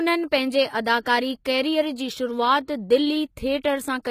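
Throughout the speech, sibilants sound gritty and lispy, and the treble has a bright but synthetic sheen with nothing above 14.9 kHz. This is likely HE-AAC compression at a low bitrate, around 20 kbps, where the upper band is rebuilt from copied lower harmonics rather than coded directly.

From 1.01 to 1.06 s, just before "कैरीयर जी", a short hiss leads into the onset, and the attack sounds softened and smeared. This is pre-echo: the codec spread its quantisation noise across the block, so noise meant for the loud attack filled the quiet 51 ms ahead of it.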